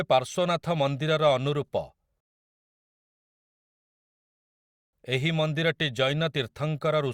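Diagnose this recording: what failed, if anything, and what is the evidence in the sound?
Playback starved: the player exhausted its downloaded audio and halted until more data arrived, a rebuffering stall. The speech drops to silence at 2.20 s and resumes at 4.93 s exactly where it left off, so nothing is missing but about 2.7 s of dead air is inserted.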